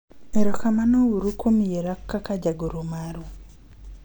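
No technical faults can be heard anywhere in it.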